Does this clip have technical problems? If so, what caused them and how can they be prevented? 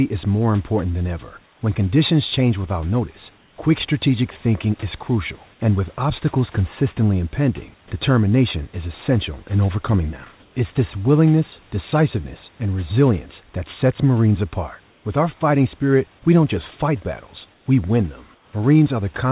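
Yes. Comfort noise replaces the background in six short pauses: 1.46–1.61, 3.38–3.56, 10.40–10.55, 14.90–15.05, 17.54–17.66 and 18.35–18.53 s. Each lasts 120 to 180 ms. The real room background sits about 37 to 38 dB below the loudest speech. In these gaps it turns into a flat, featureless hiss. That hiss is usually about 2 to 4 dB quieter, though at 10.40 s the level holds. The likely cause is discontinuous transmission: the sender stopped sending during silence, and the receiver filled the gap with synthetic noise. Turning off discontinuous transmission, or using finer comfort-noise updates, would prevent this.

Sound dropped by the voice detector occurs once, from 7.88 to 7.91 s. For 30 ms the audio gives way to steady noise, and about 20 ms of real sound is lost. It is brief. The detector likely judged the sound to be background and stopped sending until it triggered again. Lowering the detector's threshold or adding a longer hangover time would keep such sounds.

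The narrow call-codec band, with nothing above 4 kHz, and the room noise about 34 dB below the speech are not faults.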